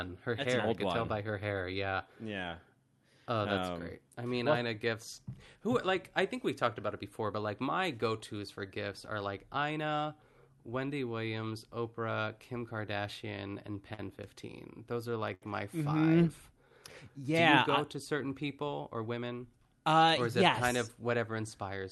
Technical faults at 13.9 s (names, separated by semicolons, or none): repeated stalls (stutter)